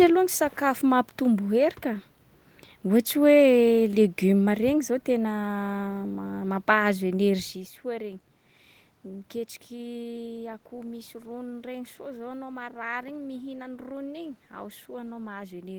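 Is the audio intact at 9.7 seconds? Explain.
Yes, the speech is intact at 9.7 seconds, with only the room's own background noise under the voice and no fault in the audio at that moment.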